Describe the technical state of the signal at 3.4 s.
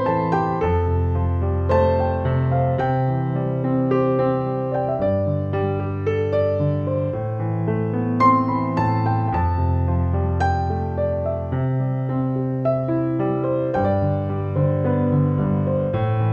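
At 3.4 s a faint, steady chirping warble sits behind the sound, very low, around 45 dB under it, and it runs through the whole clip. This is timecode bleed: linear timecode leaking in from a neighbouring track or cable, its square wave flipping between tones near 1 and 2 kHz, at a rate that fits 23.976 fps code.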